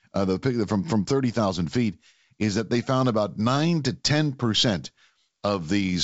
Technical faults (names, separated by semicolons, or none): none